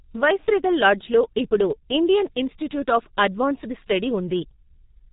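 Throughout, heavy G.723.1 codec compression, at a rate sounding near 6 kbit/s, removes everything above 3.8 kHz, leaving the speech muffled and hoarse with blurred consonants.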